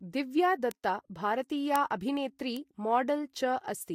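Bit error spikes tick at 0.71 s, 1.76 s and 2.57 s. A flipped bit makes a sample jump by a power of two and snap back. Each is one sharp broadband tick, unrelated to the speech.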